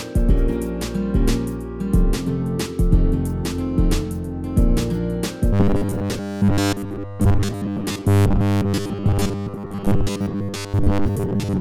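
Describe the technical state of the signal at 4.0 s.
At 4.0 s there's a doubled audio track running right through, with a dry, full-level copy trailing about a second behind, likely from a second, slower capture path.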